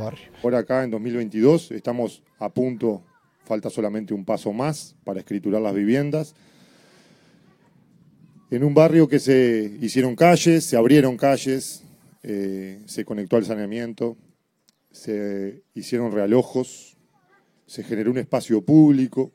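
From 9.98 to 13.01 s the audio turns thin, bright and sibilant, the top end about 8 dB hot at 10 kHz: pre-emphasis left on, matching the CD 50/15 µs curve without de-emphasis.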